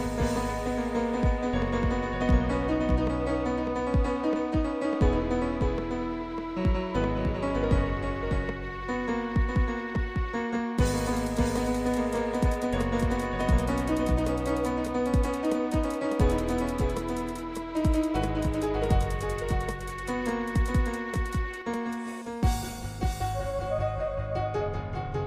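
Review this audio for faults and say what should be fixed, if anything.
There's a doubled audio track running through the whole thing: a second, full-band copy trails the original by roughly 0.7 s, about 5 dB down, clean and dry with no decay. It's likely the same signal captured twice through a slower second path. Make sure each source reaches the mix through just one route, and mute any monitoring or loopback return.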